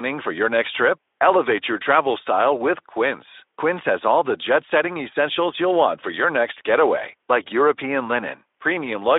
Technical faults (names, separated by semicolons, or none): none